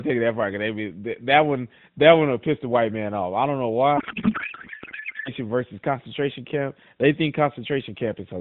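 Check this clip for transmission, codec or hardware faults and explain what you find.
There's one real fault here, sitting on top of AMR narrowband audio that's band-limited to 4 kHz. From 3.98 to 5.31 s there's a codec payload misread. The decoder seems to be reading octet-aligned AMR frames as bandwidth-efficient ones, so every field lands in the wrong place, and the speech collapses into garbled, warbling noise.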